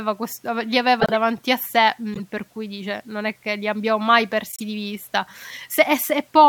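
Speech with three runs of corrupt frames decoded: glitches at 1.00–1.12 s (a handful of frames, fairly loud), 2.14–2.20 s (a couple, quieter) and 4.52–4.60 s (a few). Flipped bits left garbled gains and codes, so energy lands at the wrong frequencies.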